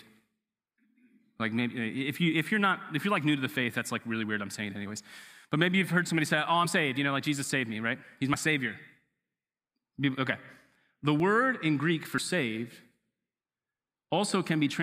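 At 8.34, 11.2 and 12.18 s the speech jumps abruptly, each skipping about 20 ms. This is likely a dropped buffer (overrun), where the recording side missed samples before they were overwritten. Unlike a dropout, no silence is inserted: the audio simply splices forward.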